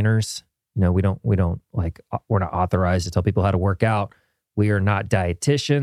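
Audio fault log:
No faults heard in this speech recording.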